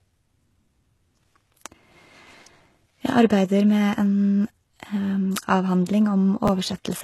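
HE-AAC compression is audible throughout the speech: nothing sounds above 12.3 kHz, and the treble has a synthetic, gritty sheen where upper bands appear copied up from lower ones rather than captured, which fits a likely low-bitrate encode near 16 kbps.

Chunks out of order occur at 6.45 to 6.49 s: a slice of about 10.7 ms plays late, after material that should follow it. Nothing drops out, but the brief jumble has hard joins.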